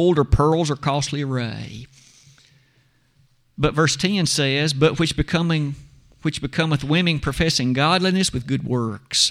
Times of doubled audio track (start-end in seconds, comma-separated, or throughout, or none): none